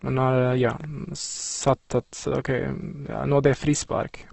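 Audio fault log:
Throughout: Opus compression. The speech sounds rough and grainy, its harmonics turned noisy and smeared, and nothing is present above 8.1 kHz. The likely cause is heavy compression by Opus in its music mode at a low bitrate, which fits something near 12 kbps. Starved bands are filled with noise or copied detail, not left empty. On a spectrogram, a flat ceiling cuts off at 8.1 kHz, with speckled, blurred harmonic lines below.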